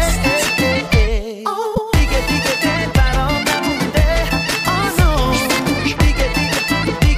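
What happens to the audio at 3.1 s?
At 3.07 s a corrupt frame was decoded. Bits inside the compressed stream were flipped, and the decoder played the damaged data instead of discarding it, across what sounds like a few consecutive frames. The misread gains and codes put energy at frequencies where it doesn't belong, peaking at roughly -20 dBFS. For about the length of those frames, this breaks into the sound as a brief artificial chirp, squeak, blip, burst of noise or short hole.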